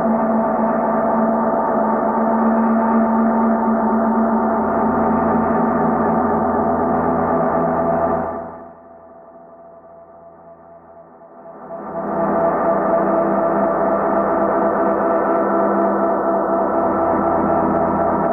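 A fine ticking, like a zip being drawn, rides on the sound from 8.14 to 8.80 s as the level falls by roughly 25 dB. The same zipping returns from 11.28 to 12.28 s as it climbs back up by about that much. This is zipper noise: the gain moves in small unsmoothed jumps, around 200 per second, and each jump leaves a tiny click.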